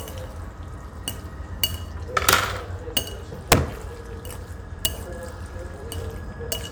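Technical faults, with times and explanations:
2.29–2.33 s, 2.97 s, 3.52 s and 4.85 s, integer overflow: peaks driven about 6, 1, 5 and 4 dB past the integer limit wrapped to the opposite sign instead of being held, giving violent cracks harsher than clipping. The waveform shows samples flipping rail to rail, and the spectrogram shows full-band vertical streaks.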